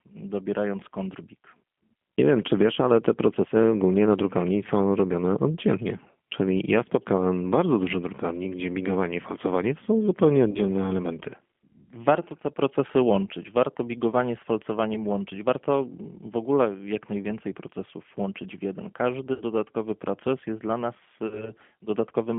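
The whole recording passes through a G.729 codec at 8 kbit/s, confined to a 200 to 3400 Hz phone band, leaving this speech audibly rough, thin and synthetic. VoIP packet loss concealed by the speech codec follows: 40 ms gaps after "falcowanie to są zupełnie" (10.51 to 10.60 s) and after "proces jest dla nas" (21.27 to 21.52 s), and a 60 ms gap after "procesów łączyć w jeden" (19.34 to 19.43 s), each extrapolated from the last pitch and filter and fading out.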